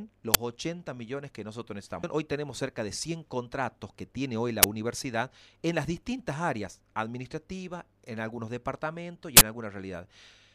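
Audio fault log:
0.34 s, 4.63 s and 9.37–9.41 s, uninitialised buffer: three short, loud faults cut into the sound, the first two loud cracks about 10 ms long and the last a burst of harsh digital noise about 40 ms long. Each time, a block of playback memory was sent out before any audio had been written into it, so whatever leftover data sat there was played as samples. That stale data bears no relation to the signal, which is why each fault is abrupt and loud.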